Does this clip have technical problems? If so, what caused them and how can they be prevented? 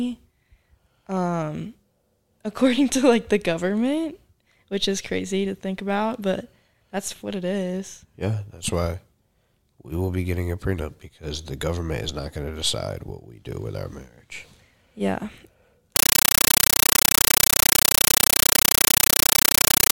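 Yes. From 15.96 s to the end, the speech gives way to loud chattering static: a compressed stream played as audio. AC-3 data was passed through undecoded, giving 9.33 ms noise bursts 31.25 times a second. That steady frame-rate chatter, which fits a 448 kbps stream, sets it apart from random digital noise or dropouts. Setting the output to PCM, or making sure the receiving device decodes the bitstream, prevents it.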